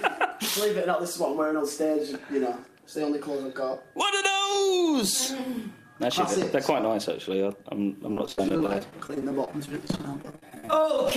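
From 8.08 s to 11.12 s the sound turns choppy, with small pieces missing throughout. This is repeated packet loss: dozens of brief holes follow one another closely, none longer than about 31 ms, and each is patched by stretching the preceding sound forward. Roughly a quarter of that last stretch is concealed audio, which produces the choppy, stuttering texture until the clip ends.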